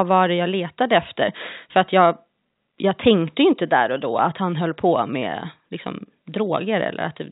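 Nothing stood out on listening to this speech, which carries the narrow band of ordinary G.711 telephone coding.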